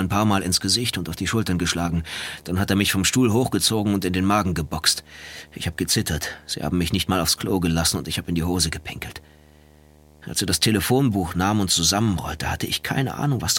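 From the start right through to the end there's video or display buzz: a screen or video cable is leaking into the audio path, so you get a steady 75 Hz buzz with a hash riding on top, sitting around 30 dB under the sound itself.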